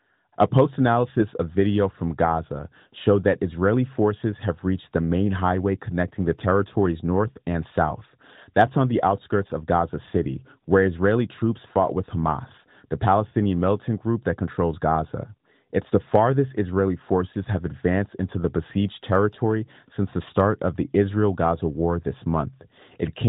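No technical faults are audible anywhere in the recording.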